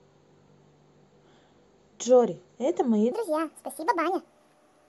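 Lost LE Audio frames at 0.47 s break this speech clip with a brief noisy smear, as the LC3 decoder conceals a gap that fits one 7.5 ms frame. A section at the wrong speed runs from 3.12 s to the end, 1.53 times too fast and about seven semitones higher, likely from playback against the wrong clock.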